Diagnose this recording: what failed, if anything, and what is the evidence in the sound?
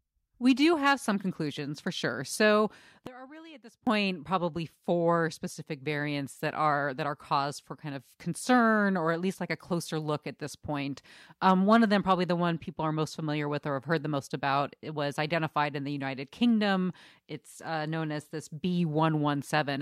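From 3.07 to 3.87 s the speech drops by about 20 dB to a faint copy, with the centred voice nearly gone, then returns at full level. That collapse points to one channel inverted, likely a polarity flip in the analogue wiring or a channel path, heard through a mono sum. Because the two channels carry nearly the same centred signal, the inverted copy cancels it, leaving only their faint difference.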